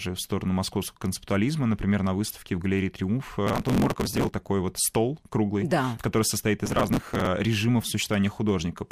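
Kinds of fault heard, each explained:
Processor overload crackle, 3.47 to 4.34 s and 6.66 to 7.27 s: the processor repeatedly misses deadlines for very short buffers, around a millisecond and a half each, and each missed one is simply skipped, so roughly 150 and then 100 tiny hard-edged gaps pile into gritty crackle, first just before "вот стол круглый да", then right after "круглый да который состоит".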